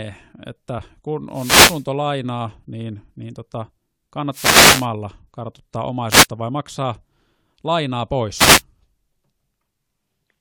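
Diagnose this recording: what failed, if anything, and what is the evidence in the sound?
Wireless microphone noise hits occur at 1.31–1.86 s, 4.29–4.89 s, 6.09–6.27 s (just before "vai maksaa") and 8.36–8.62 s as brief swishes of static over the speech. This is an analogue radio-link failure: reflections cancel the FM carrier, so receiver noise surges through each fade.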